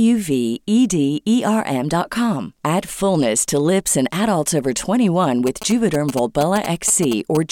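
GSM signalling bursts run from 5.47 s to 7.37 s. A nearby 2G phone exchanging brief signalling traffic radiates short radio bursts, which the audio circuitry rectifies into sound. The result is a galloping dit-dit-dit of short 217 Hz buzzes, roughly 10 dB below the speech.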